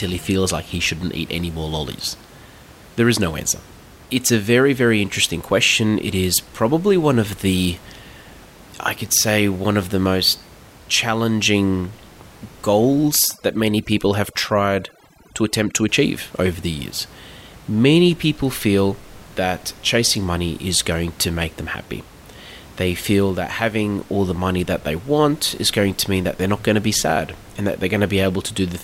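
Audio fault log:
13.09–15.89 s, overdone noise removal: over-strong reduction cuts bands near the noise floor, leaving twinkling specks in the background before "achieve over".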